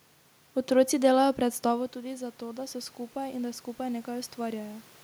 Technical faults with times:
1.68-4.91 automatic gain rising

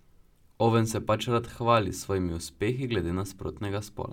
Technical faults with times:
none

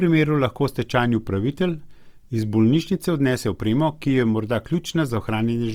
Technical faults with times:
0.00-5.74 Opus compression

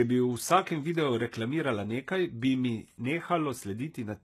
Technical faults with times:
0.00-4.24 HE-AAC compression

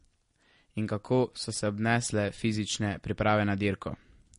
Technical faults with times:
0.00-4.39 MP3 compression

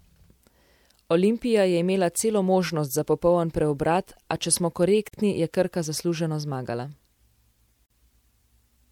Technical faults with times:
5.08-5.13 gap at a join of encoded pieces
7.86-7.90 gap at a join of encoded pieces

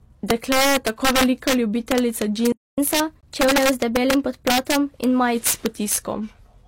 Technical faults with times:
0.00-6.67 integer overflow
2.52-2.78 playback stall
2.78-5.35 catch-up at higher speed
3.21-3.23 gap between stream segments

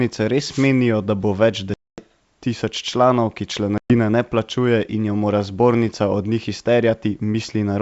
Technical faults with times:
0.00-7.82 sample clock jitter
0.47-0.70 wireless microphone noise hit
1.74-2.02 packet loss on an ADPCM call
3.78-3.96 packet loss on an ADPCM call

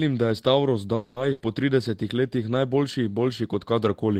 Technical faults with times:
0.95-1.19 call audio freeze
1.32-1.43 burst of packet loss

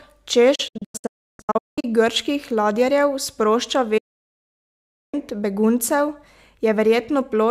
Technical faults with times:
0.55-1.85 digital broadcast dropout
3.97-5.14 digital broadcast dropout

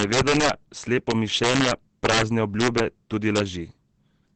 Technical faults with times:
0.00-4.35 Opus compression
0.00-0.50 integer overflow
1.11-2.22 integer overflow
2.60-2.80 integer overflow
3.36-3.40 integer overflow

